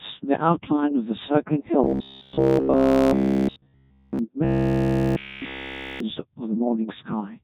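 From the first moment the speech carries the signature of the Codec 2 vocoder, at a heavy setting that sounds like its 1.2 kbit/s mode. Only pitch, voicing, energy and a coarse spectral envelope survive, and the decoder rebuilds the voice from sine waves, so it comes out robotic and buzzy. On a spectrogram the harmonics look smeared and over-regular, with nothing above about 4 kHz. The waveform bears little resemblance to the original shape.

From 1.84 to 4.19 s, and again from 4.45 to 6.00 s, a robotic sound from repeated short buffers takes over. All of both spans is repetition. This is likely a playback stream fed too slowly, looping the last scrap of audio while fresh material is dropped. The loop imposes a rigid 66.8 Hz metallic buzz, which fits a buffer of about 15 ms. The waveform shows an identical cycle tiling end to end, and the spectrogram shows a fixed comb of lines spaced 66.8 Hz apart.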